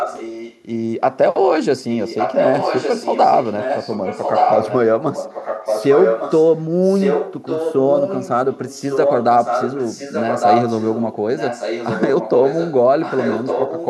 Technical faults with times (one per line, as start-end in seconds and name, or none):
0.00-0.63 echo leak
1.84-6.54 echo leak
6.82-13.87 echo leak